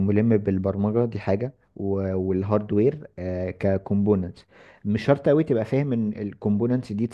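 No technical faults are audible.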